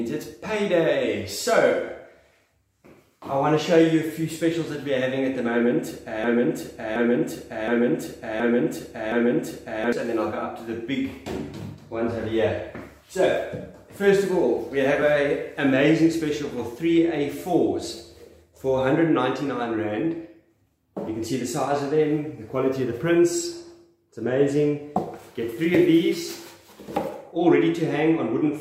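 The audio has a broken-record loop from 6.24 to 9.93 s: a 0.72 s fragment repeats back to back five times, and whatever should have played there is lost. It was likely caused by a player, encoder or stream that stalled and kept resending its last buffer. On a waveform or spectrogram, the same block appears as identical copies in a row.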